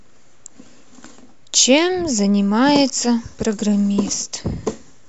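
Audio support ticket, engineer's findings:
No faults found on listening; the speech path shows no defect needing action.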